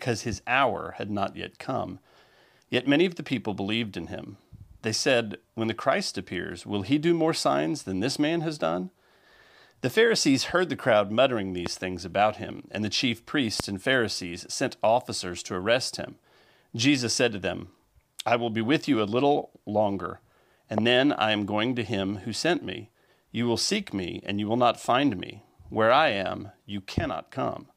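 At 11.66 to 11.68 s a loud pop cuts in, peaking roughly 15 dB above the surrounding sound. Two more follow, at 13.60 to 13.62 s and at 20.78 to 20.80 s, each around 20 dB above it. Every one is a single sharp thump, about 20 ms long. The audio carries on beneath each pop. A sudden voltage pulse was likely added to the signal, from a switch, a plug or static.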